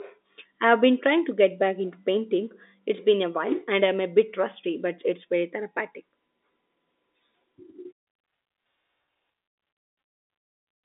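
No technical faults can be heard in this speech. The G.711 telephone coding confines the sound to the usual phone-line band of roughly 250 Hz to 3.7 kHz, with at most a faint level-following hiss from its 8-bit logarithmic steps.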